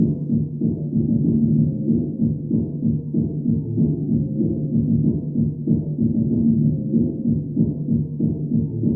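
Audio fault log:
No faults detected.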